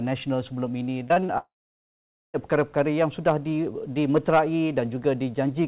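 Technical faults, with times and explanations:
1.08–1.30 s, repeated packet loss (robotic sound): four short holes, the longest 22 ms, patched by repeating the previous sound. About 37% of the span is filled in this way, so the sound turns choppy and robotic but never falls silent.
1.38–2.36 s, long network dropout: a brief buzz or hiss continues the last sound and then gives way to about 0.85 s of silence before the audio resumes. This is likely nearly a second of lost network audio, heard as one unbroken gap rather than repeated choppiness.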